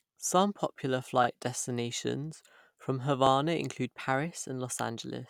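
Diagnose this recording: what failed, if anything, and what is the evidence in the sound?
What failed is chunked processing: you've got overlapping chunks, a buffer-stage fault. Listen at 1.24 to 1.27 s, just before "destinations from", and again at 3.27 to 3.29 s, right after "destinations from". Each time there's a quick stutter where about 25 ms of the speech plays twice. The two joins sit 2 s apart, which fits 2-second blocks where each new one starts 25 ms before the previous one finished, so the seam gets replayed.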